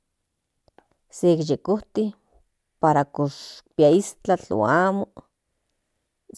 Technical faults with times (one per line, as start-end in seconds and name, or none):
none